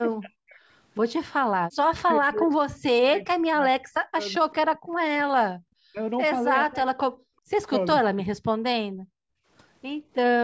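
From 0.19 to 0.61 s, and again from 1.57 to 5.16 s, the talker keeps dipping or cutting out by about 40 dB. That's likely speech suppressed in double talk: the echo canceller turns this side down while the far end is also talking. At 5.5 s the room sound drops by about 40 dB for roughly a tenth of a second, which is background gated by the echo canceller clamping the mic while the loudspeaker plays. The speech dips come back from 5.85 to 5.99 s and from 6.64 to 7.12 s. The background gating hits again at 7.4 s, about 37 dB down, and a last patchy stretch of suppressed speech runs from 7.94 to 9.16 s.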